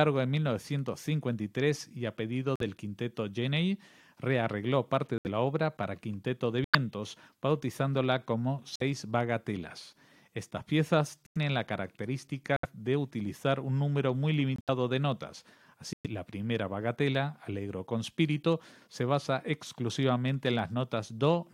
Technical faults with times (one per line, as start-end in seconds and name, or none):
2.56-2.62 corrupt frame muted
5.18-5.27 corrupt frame muted
6.64-6.75 corrupt frame muted
8.76-8.82 corrupt frame muted
11.26-11.37 corrupt frame muted
12.56-12.65 corrupt frame muted
14.56-14.69 corrupt frame muted
15.93-16.07 corrupt frame muted